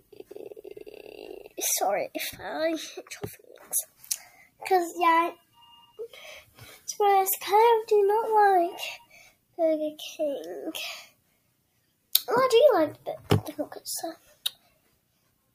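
A sudden gain jump runs from 2.3 to 3.6 s. The level drops by about 9 dB in a single step and returns at the end. The sound and its background noise fall together, as a gain setting likely applied without any ramp would cause.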